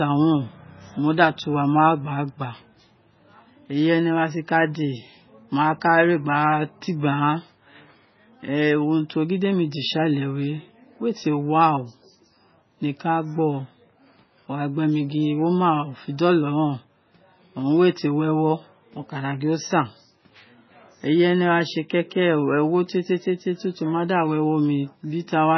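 From start to finish the speech carries heavy damage of the kind left by MP3 compression, likely at a very low bitrate in the region of 16 kbps. Nothing is present above 6 kHz, so the top of the spectrum is sliced off flat and s sounds lose their edge. With so few bits, weak frequency lines drop in and out from frame to frame, giving a watery, swirling texture, metallic chirps on sibilants, and smeared consonant attacks.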